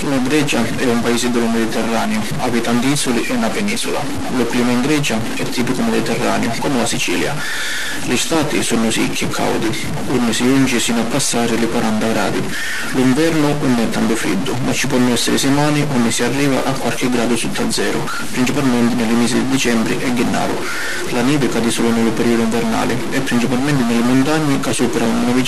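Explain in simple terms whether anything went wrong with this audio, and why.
A distortion runs through the whole recording, from start to finish. It rides on top of the speech, and even the quiet gaps between phrases aren't silent but are filled with noise. The likely cause is a stuck bit: one of the binary digits that make up each sample was jammed at a fixed value, perhaps by a faulty connection or converter, so about half the samples come out wrong and quiet moments turn into noise.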